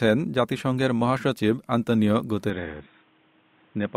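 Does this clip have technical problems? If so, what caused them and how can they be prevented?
Yes. At 2.5 s the recording most likely switched its input to a poorer device, such as a second microphone or a headset's call profile, and stayed there to the end. The new path passes nothing above 3.8 kHz, so the speech abruptly turns dull and boxy. A new background noise appears around 35 dB below the speech. There is no gap at the switch, and the level stays about the same. To prevent it, lock the input device in the system settings and disable automatic switching to headsets during recording.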